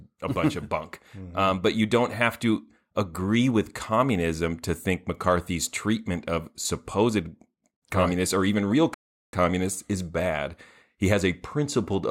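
At 8.94 s the player likely ran short of data or had its output thread held up, causing a playback stall. The speech drops abruptly into silence for 390 ms, until 9.33 s, before sound returns once the output recovers.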